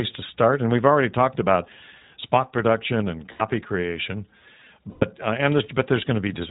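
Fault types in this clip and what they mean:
iLBC codec: Across the whole clip the speech is band-limited and plainly rough, with a slightly synthetic edge and nothing audible above 4 kHz. This comes from iLBC, a narrowband VoIP codec that codes each frame's excitation on its own without drawing on the frame before. The short-frame behaviour and the level of coarseness fit its 20 ms mode at about 15.2 kbps.
lost iLBC frames: Twice the speech turns into a brief held, buzzy vowel-like sound. The first runs from 3.32 to 3.42 s, about 80 ms, right after "about spot production and". The second runs from 4.90 to 5.06 s, about 120 ms. The decoder filled the missing packets by repeating the last pitch cycle mixed with noise. The two gaps fit four and six lost 20 ms frames, and the speech recovers almost immediately afterwards.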